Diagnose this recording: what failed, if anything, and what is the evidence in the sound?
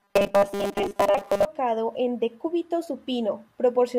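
From 0.01 to 1.46 s, just before "en decúbito", the speech becomes a rigid metallic buzz locked at 200 Hz that only loosely tracks the words. This is robotic sound from repeated short buffers, most likely at the driver or buffer stage. When input arrived too slowly, a 5 ms segment was replayed in place of roughly 70 percent of the real audio. Unlike codec warbling, the buzz holds one fixed pitch set by the repeat length rather than by the voice.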